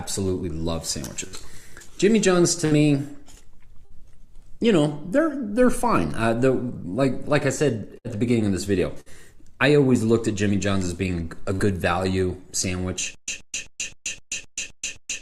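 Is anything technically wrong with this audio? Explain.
Yes. The audio has two kinds of fault: repeated bursts of packet loss and, at the end, a stutter with silent gaps.

Burst of packet loss occurs at 1.27, 2.65, 3.85, 7.98, 9.00 and 11.53 s. Each time, about 60 ms of audio never arrived in time to play. The receiver extends the last received sound for roughly 55 to 60 ms, fading it down, then playback jumps ahead with that stretch missing. The event at 9.00 s runs longer, to about 9.15 s. Each one sounds like a brief smeared hold and a skip.

A stutter with silent gaps starts at 13.15 s and continues to the end. A 126 ms fragment plays, then about 133 ms of digital silence follows, and the same fragment returns every 259 ms, roughly four times per second. The likely cause is a stalled player or stream that replays its last buffered fragment on each retry and then runs dry. The audio that should have played during this stretch is lost.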